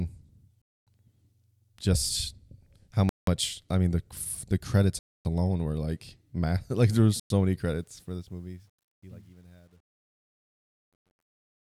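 Speech drops out four times with Bluetooth stalls. The playback halts to silence and then carries on. The first gap runs from 0.62 to 0.87 s, about 252 ms. The second, 3.09 to 3.27 s, falls after "just how" and before "I mean the the". The third, 4.99 to 5.25 s, sits between "mean the the credits" and "alone were like math". The last, 7.20 to 7.30 s, follows "like there were". The likely cause is radio interference delaying packets until the headphone buffer ran empty. From 7.59 s to the end, the closing fade, which starts around 7.6 s and finishes at 11.72 s, shows truncation distortion. As the level drops, the waveform is squared into coarse steps with no dither. The tail turns gritty, worst from 8.61 to 11.72 s. That fits a fade computed at about 10 bits.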